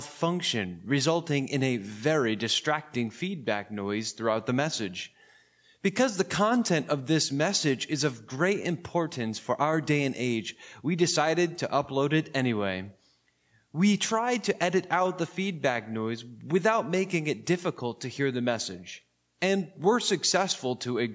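Nothing stood out on listening, and the audio carries the ordinary imprint of call microphone processing, with the lowest bass thinned and nothing above 8 kHz.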